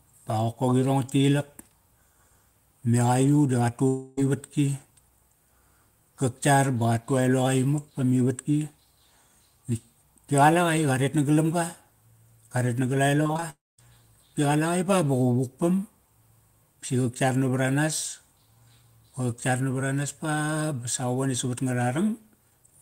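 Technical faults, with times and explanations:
3.87–4.19 s, long network dropout: about 300 ms of audio missing, bridged entirely by a fading concealment buzz with no silence. Likely a network interruption.
13.23–13.44 s, repeated packet loss (robotic sound): five short gaps, longest 20 ms, patched by concealment over 43% of the span, giving choppy sound with pieces missing.
13.50–13.80 s, long network dropout: about 280 ms lost. Concealment fades quickly, leaving roughly 210 ms of silence before the audio resumes. Likely a network interruption.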